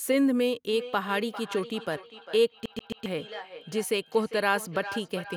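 From about 0.71 s right through to the end, there's a feedback echo between two devices. It sounds like two devices in the same room sharing a call: one plays back what the other's mic sent, that mic hears it again, and neither echo canceller catches it because each only removes its own playback. The speech comes round again roughly every 0.4 s, thinner and more ringy each pass, peaking at about 13 dB below the direct speech.

Then between 2.66 and 3.06 s you get a CD stuck on one turn. A scratch keeps knocking the laser back to the same spot each revolution, so a 134 ms slice of the speech plays three times over, with a tiny mute at every jump. It's that quick, perfectly even stutter you'd know from a skipping disc, and it sits right on top of the ongoing echo.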